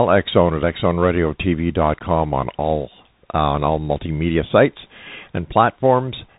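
Bluetooth CVSD headset codec damage runs throughout the speech. Each sample becomes one up-or-down bit with an adapting step, fitting a 64 kbps link, so nothing passes above 3.8 kHz, s sounds turn scratchy, loud bright moments distort, and granular hiss sits underneath.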